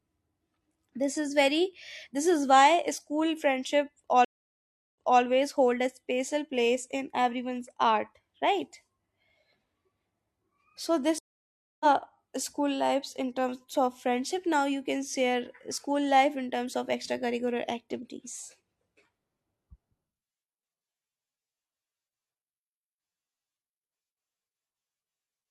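At 4.25 to 5.21 s, after "is why school friendship", a stream reconnect drops the connection and restarts the decoder. The waveform shows a flat 0.71 s gap, then resumes 0.26 s earlier, repeating audio before "hold a special place". At 11.18 to 11.86 s, a 0.62 s gap jumps about half a second ahead to "school lives in terms".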